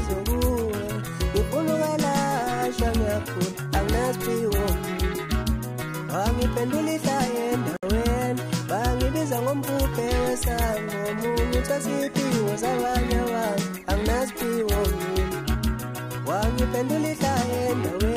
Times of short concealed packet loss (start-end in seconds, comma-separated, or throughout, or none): none